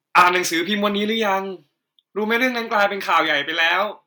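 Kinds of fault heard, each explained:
Microphone overload: at 0.15 to 0.37 s, 2.79 to 2.83 s and 3.13 to 3.17 s, the loudest speech peaks are flattened against the converter's ceiling, giving a harsh, crackly edge. The first is worst, driven about 9 dB past full scale with a few percent of samples squared off. The later two overshoot by about 3 dB and about 2 dB and sound briefer and milder, likely from input gain set too high for these peaks.
Microphone volume stepped down: at 0.22 s, 1.23 s and 3.27 s, speech and background both drop abruptly in level, by about 4 dB at the first and about 3 dB at the other two, with no fade. The first drop lands inside the distorted opening burst and the last follows shortly after the 3.13 s peak. This is likely automatic gain control cutting the device's input volume in single steps after detecting overload.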